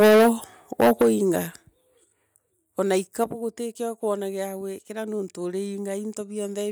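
Microphone overload, likely from the input volume being set too high, drives the converter past its limit twice in this speech recording. From 0.0 to 0.29 s the peaks overshoot by about 14 dB and roughly half the waveform is flattened. From 0.8 to 1.09 s they overshoot by about 12 dB with a smaller share clipped. Both passages carry a harsh, crackling edge on the loudest syllables. The microphone volume is then stepped down, likely by the call software reacting to that clipping, which lowers the device's input volume in discrete jumps. The first jump comes at 1.02 s, during the second distorted burst, and drops the level by about 8 dB. Two further cuts of about 6 dB each follow at 2.04 s and 3.24 s. Each one makes the voice and the background fall together abruptly rather than fading.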